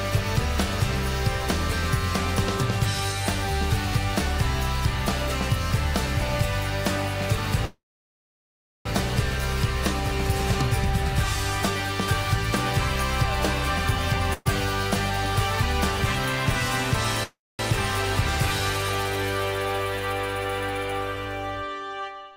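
At 7.65 s the sound stops moving forward and a call audio freeze begins, lasting until 8.87 s. The receiver holds the last sound briefly as a fading tail, then goes silent for about 1.05 s of the 1.2 s gap. When playback resumes it continues exactly where it stopped, so nothing is lost, but everything afterward arrives 1.2 s later. The likely cause is packets held up in transit, leaving the jitter buffer empty.

From 14.33 to 14.47 s there is a burst of packet loss. For 120 ms the receiver extends the last sound and turns it down, with no silence, and the audio then picks up 420 ms further on. That section is missing, and the jump removes 300 ms of the earlier added delay.

A second call audio freeze runs from 17.23 to 17.61 s. Again there is a short continuation of the last sound, then about 220 ms of silence before the audio resumes from where it halted. This inserts a 356 ms gap without losing any material, likely from another stall in packet delivery.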